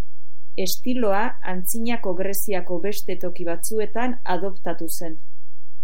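Throughout the speech, a DC offset of about -13 dBFS shifts the waveform off zero, costing headroom; unlike hum, it sits silently at 0 Hz.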